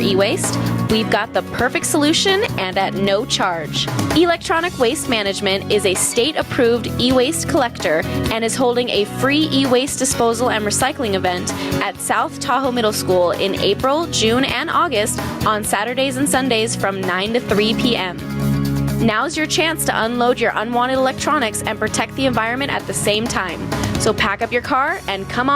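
Gain pumping runs through the whole clip. The level swings by around 15 dB, so loud and soft passages sit unnaturally close together and everything sounds squashed. The likely cause is input gain set far too high with a fast limiter or compressor clamping down.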